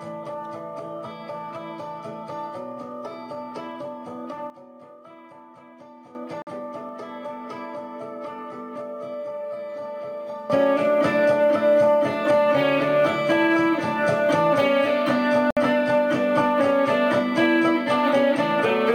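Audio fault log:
4.5–6.15 s and 10.50 s to end, sudden gain jump: level and noise floor drop about 12 dB, then later leap about 14 dB, with no ramp, likely an unsmoothed gain change.
6.42–6.47 s and 15.51–15.57 s, Bluetooth stall: sound cuts to silence for 49 ms, then 62 ms, and resumes, likely the headphone buffer running dry during interference.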